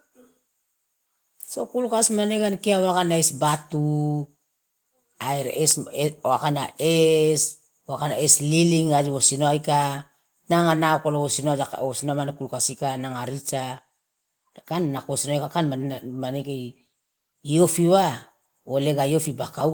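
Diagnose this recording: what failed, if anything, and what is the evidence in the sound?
No failure is audible anywhere in the chain, and nothing in the speech signal points to a fault at any stage from capture to playback.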